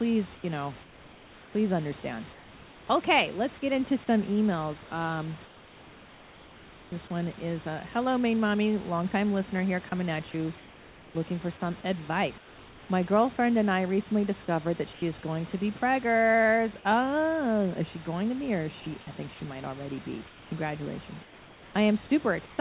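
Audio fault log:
0.35–2.87 s, 5.45–6.92 s (before "this one is uh"), 10.58–11.15 s (between "here coming at you" and "looking for some"), 12.38–12.89 s, 14.93–15.02 s (between "I recently discovered that" and "is going to be"), 20.27–22.58 s: comfort noise in place of the background. In these speech pauses the room's textured noise becomes a steady, featureless hiss, about 3 dB quieter at 5.45, 10.58 and 12.38 s (about 5 dB at 14.93 s), likely from discontinuous transmission. Unlike a noise gate, the pauses never go silent.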